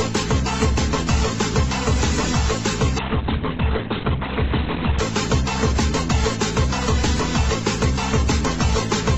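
From 3.0 to 5.0 s an adaptive stream at a lower bitrate takes over abruptly, without a gap. Everything above 4.2 kHz vanishes, leaving a muffled, watery sound that fits roughly 12 kbit/s Opus. A spectrogram shows a hard ceiling there.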